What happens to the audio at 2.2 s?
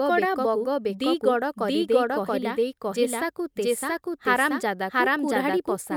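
At 2.2 s, as through the whole speech clip, every sound arrives twice: a second, equally loud copy trails the first by roughly 0.7 s, so syllables pile onto later ones and the speech turns into an overlapping jumble. This is a doubled audio track. The copy is full-band and dry, with no decay or room colour, which points away from an acoustic echo and toward the signal likely being captured a second time through a slower path.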